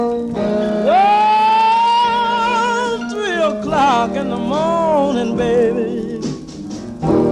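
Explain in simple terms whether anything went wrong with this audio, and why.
Nothing went wrong here; no faults can be heard.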